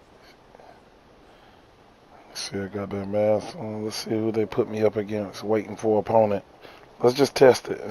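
From 2.39 to 3.54 s the sound runs 5.4% slow and 97 cents flat, then snaps back, likely a drift correction step in clock-matching playback.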